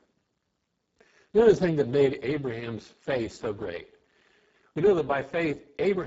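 Speech runs through the Speex codec at a very low setting for the whole clip, which fits a bitrate near 6 kbps. So few bits reach the excitation that the speech sounds hoarse and noisy, with a hissy, noise-like upper band that stops at 7.7 kHz.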